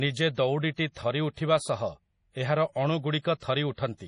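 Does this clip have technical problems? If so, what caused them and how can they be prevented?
Yes. MP3 compression runs throughout: nothing above 10.5 kHz, with heavy watery, swirling damage, likely from MP3 encoding at a low bitrate around 32 kbps. Encoding at a higher bitrate prevents this.

Pre-echo comes at 0.92–0.96 s and 1.34–1.37 s. The codec spreads noise across its block, so hiss smears about 40 ms and 36 ms before each attack. A higher bitrate or a codec with shorter blocks would prevent it.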